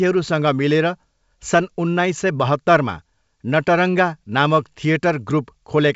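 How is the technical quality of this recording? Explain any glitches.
No glitches can be heard anywhere in the recording. The speech carries the character of G.722 wideband telephone coding at 64 kbit/s, with a faint upper-band hiss at most and nothing above about 7.7 kHz.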